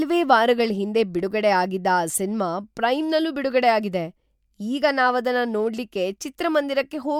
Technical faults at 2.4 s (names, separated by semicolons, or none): none